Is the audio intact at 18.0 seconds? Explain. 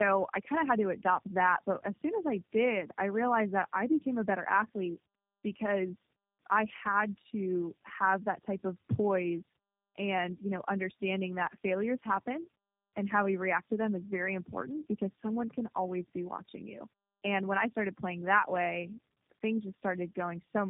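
No, at 18.0 seconds the speech still carries the tandem speech coding heard across the whole clip. It sounds like three low-rate codecs in series, each re-encoding the last one's damage, so it's rough, warbly and muffled, with nothing above 3.7 kHz.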